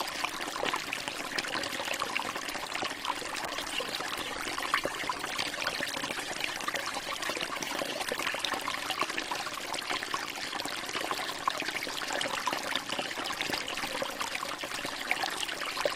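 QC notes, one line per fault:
3.46–8.41 s, call bitrate drop: the sound turns coarse and dulled, with a watery, smeared texture and the top end cut away, then clears after 8.41 s. The call's bandwidth estimate fell and the encoder was pushed from roughly 48 kbps down to about 15 kbps, which fits the degradation heard. At that rate Opus quantises far more crudely and narrows the coded band, holding that low setting for about 4.9 s before recovering.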